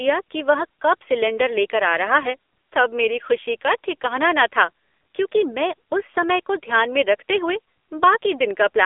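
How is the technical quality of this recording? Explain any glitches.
The technical quality is poor throughout, because the whole recording has passed through an AMR narrowband mobile codec. For the full length, the speech is squeezed into a phone-line band of roughly 300 Hz to 3.5 kHz, with nothing above 3.6 kHz. It sounds plainly buzzy and synthetic, which fits a low AMR-NB mode near 7.4 kbps, where a vocal-tract model driven by sparse pulses replaces the real waveform. A spectrogram shows a hard ceiling near 3.6 kHz and an empty low band.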